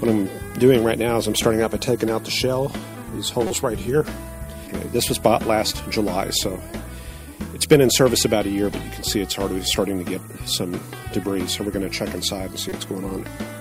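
The audio has two brief spots of damaged data in a compressed stream, at 3.47–3.51 s and 12.69–12.72 s. Corrupted frames are misread or rejected, and the decoder resyncs at the next header. A spectrogram shows a narrow vertical band or gap, and the waveform shows an abrupt break.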